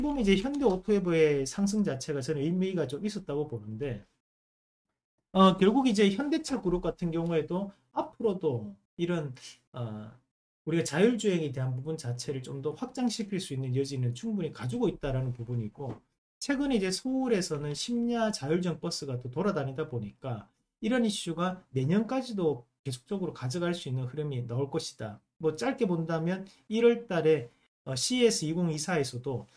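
There are no technical faults to describe at any point in the audio.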